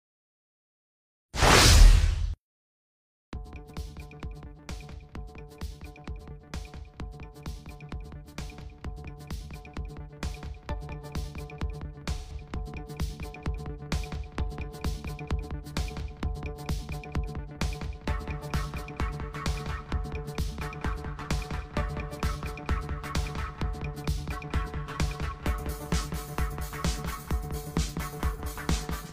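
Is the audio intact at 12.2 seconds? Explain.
No, at 12.2 s you're inside an AAC frame loss with concealment, running from 12.17 to 12.33 s. That's about 128 ms missing, which fits three lost frames, and the decoder patches the gap from the last good spectrum, giving a smeared, noisy or phasey stretch.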